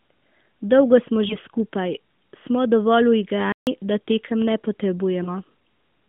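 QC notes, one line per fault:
1.28 to 1.36 s and 5.24 to 5.34 s, lost AMR speech frames: at each point one 20 ms frame fails its checksum and the decoder fills the gap by repeating the previous pitch and vocal tract shape at lower gain, then needs a moment to settle. The result is a short dip with a warble, lasting about 0.1 s, after which the sound returns a little rough. On a spectrogram the harmonics stretch flat across the gap and fade, sitting inside the 150 Hz to 3.6 kHz band of the narrowband channel with nothing above 4 kHz. The waveform shows a small drop in amplitude.
3.52 to 3.67 s, playback stall: the sound stops mid-flow for about 150 ms of complete silence and then picks up again. The likely cause is that the player ran short of data or its output thread was briefly held up, so nothing was sent to the output until it caught up. On the waveform this shows as a flat, near-silent stretch with hard edges on both sides. 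On the spectrogram it is a clean vertical blank band across all frequencies, unlike the stretched, fading harmonics of the lost frames.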